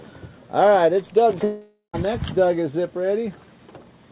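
From 1.44 to 1.95 s the sound gives way to a buzzy continuation of itself that fades into a short stretch of near silence, then resumes with about half a second missing, likely a long network dropout. The fading concealment, rather than an abrupt cut, separates it from an edit, and its length from a brief packet loss. The band-limited sound, with nothing above 4 kHz, fits a 64 kbps G.711 call path.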